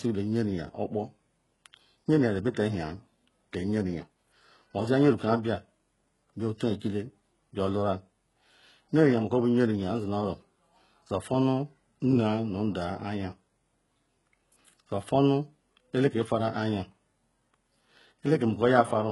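Throughout the speech, s sounds turn gritty and lispy over a rebuilt-sounding treble that stops near 11.4 kHz, likely heavy HE-AAC compression around 12 kbps.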